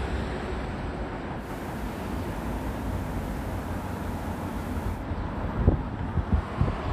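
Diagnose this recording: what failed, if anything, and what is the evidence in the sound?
Digital radio blending to analogue, from 1.35 s to 5.07 s, at the receiver before playback. The hybrid tuner lost its digital stream and cross-faded over 158 ms to the station's FM broadcast, then back after roughly 3.7 s. On the FM side, hiss rises to about 25 dB below the signal. The level stays matched across both blends.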